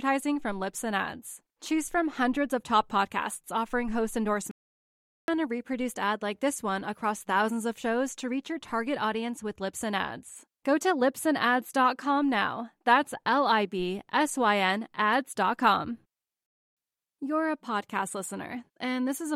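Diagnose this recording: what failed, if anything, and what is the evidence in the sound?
An audio dropout to silence cuts the speech off just after "top podcasts offering host" at 4.51 s and brings it back at 5.28 s on "a reproduced ad like", so about 0.77 s is missing. The gap holds no room tone at all. On a waveform it is a flat line between abrupt edges, and on a spectrogram a fully black vertical band. The likely failure is at the input stage, a lost connection or mute upstream, while the recorder kept writing silence.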